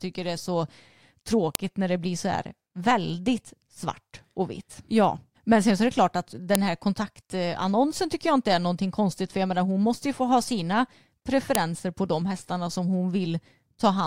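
File header played as audio at 1.55, 6.55 and 11.55 s: the speech was joined from 5 s pieces without stripping each piece's WAV header, so those bytes play back as samples, giving a sharp, loud click at every join regardless of the speech underneath.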